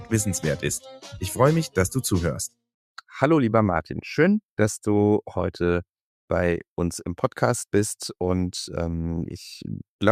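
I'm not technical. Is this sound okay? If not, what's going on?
No. From 0.86 to 1.1 s, a short stretch of sound is cut by the noise suppressor: the processing mistook it for background noise and turned it down, so for about a fifth of a second it drops noticeably quieter, dipping out before returning.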